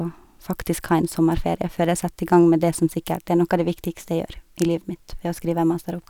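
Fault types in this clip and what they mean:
Bit error spike: a single flipped bit in memory or on a digital link knocks one sample off by a power of two before it snaps back, so the speech carries three isolated broadband ticks, at 0.74 s, at 2.33 s just before "gang med det som", and at 3.15 s just after it, peaking at about -12, -24 and -18 dBFS.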